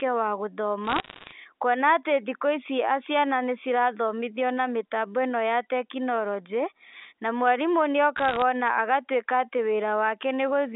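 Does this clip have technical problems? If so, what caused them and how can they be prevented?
Yes. Bit errors on a digital phone line cause two bursts of crackle, from 0.85 to 1.32 s and from 8.16 to 8.42 s. In the G.711 A-law stream, each flipped bit corrupts one sample. Sign or high-bit hits give sharp ticks. The first burst, at an error rate of around one percent, is denser than the second, which is about half that. A waveform shows isolated single-sample spikes, and a spectrogram shows thin vertical broadband lines over the unchanged speech band. A cleaner line, or error detection with concealment on the transmission link, would prevent this.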